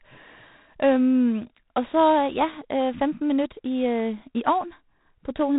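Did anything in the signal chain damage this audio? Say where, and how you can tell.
Yes, at the codec stage: the whole speech clip shows G.726 ADPCM damage. A harsh, rasping hiss rises and falls with the speech level, and nothing passes above 4 kHz. Coding each sample's difference from a prediction in very few bits leaves plainly audible quantisation noise, which fits 24 kbit/s.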